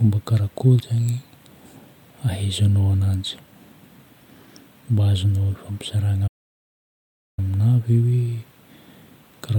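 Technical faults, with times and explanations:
6.27–7.39 s, playback stall: the speech halts mid-flow and the output falls silent for 1.10 s before resuming, likely because the player ran short of data or its thread was blocked. The waveform flattens to near silence there, and the spectrogram shows an empty vertical band across all frequencies.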